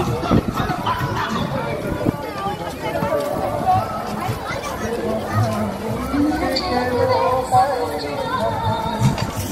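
Right around 2.11 to 2.13 s there's a skip ahead: playback suddenly jumps forward, and something like 0.7 seconds of audio just never gets played. Nothing fills the hole, so the material before and after is butted straight together. That's what you get when a chunk is thrown away, in transit or by an overflowing jitter buffer, while later audio is already queued. The join sounds abrupt, like a cut.

Right after that, from about 2.21 to 3.16 s, you get a jitter buffer speed-up. The buffer was still sitting on more audio than it wants, so the receiver trims tiny slices, a pitch period or a few at a time, over and over until it has shaved off roughly 50 ms. Playback runs at about 105% speed with the pitch unchanged, so that stretch feels a touch rushed.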